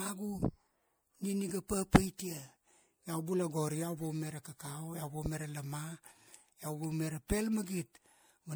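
Throughout the speech there is generation loss: a swirly, hollow, smeared quality with blurred attacks and nothing above 20.9 kHz. It points to MP3 at around 96 kbit/s, likely re-encoded about five times, each pass requantising on a shifted frame grid so the damage accumulates.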